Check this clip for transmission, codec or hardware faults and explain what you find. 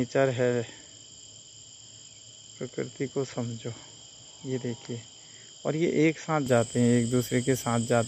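One fault stands out. From 0.0 to 6.46 s, the input likely switched to a poorer device: nothing above 7.6 kHz passes, so the sound is dull and about 5 dB quieter, then clears without a gap.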